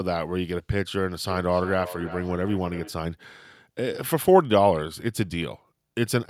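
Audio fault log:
1.23–2.99 s, feedback echo between two devices: the speech comes back roughly every third of a second, peaking about 15 dB below the direct sound. A second device in the room replays this microphone's signal, which is picked up again, and neither echo canceller removes the other device's playback.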